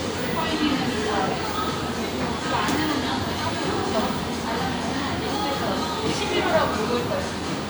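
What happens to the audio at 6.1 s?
Nothing goes wrong at 6.1 s; the sound carries straight through that moment without any dropout, click, distortion or other fault.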